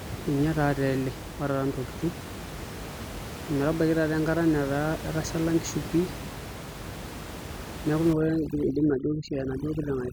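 From 8.13 s to the end at 10.12 s, overdone noise removal sets in. The suppressor gates individual frequency bands down to almost nothing whenever they sit near its noise estimate, so the room noise, about 11 dB below the speech before this point, collapses into near silence with twinkling specks. Quieter parts of the speech are cut with it. A spectrogram shows patchy, isolated time-frequency blobs on a black background.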